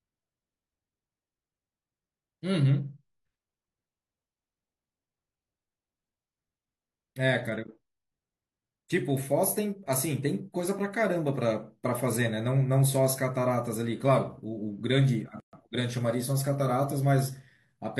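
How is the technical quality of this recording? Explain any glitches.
One glitch stands out, a gap at a join of encoded pieces from 15.40 to 15.53 s. The speech was encoded as separate pieces and joined untrimmed, so encoder start-up delay and end-of-piece padding remain. That leaves a 129 ms gap whose edges are smeared, so the silent part is shorter, after which the speech resumes exactly where it stopped.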